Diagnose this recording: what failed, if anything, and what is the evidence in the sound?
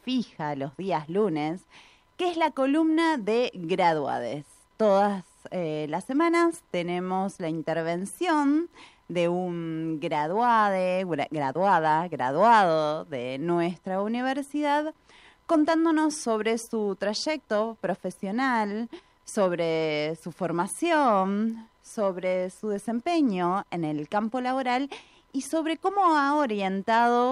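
Nothing in the recording points to a failure at any stage of the chain. The sound holds steady throughout, with no event that calls for a diagnosis.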